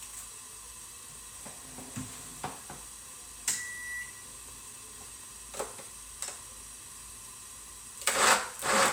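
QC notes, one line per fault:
No faults heard in this recording of sounds.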